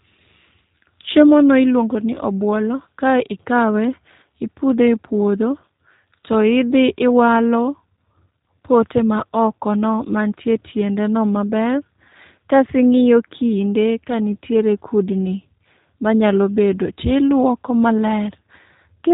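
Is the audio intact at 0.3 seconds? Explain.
No. At 0.3 seconds, as throughout the clip, the speech carries G.729 codec damage. The codec rebuilds each 10 ms frame from a vocal tract filter, a pitch predictor and a few excitation pulses, which fits an 8 kbit/s G.729A stream. The result is plainly rough and slightly synthetic, with nothing above about 3.8 kHz. A simple low-pass filter would only dull the sound, but here the voice also takes on that buzzy, reconstructed texture.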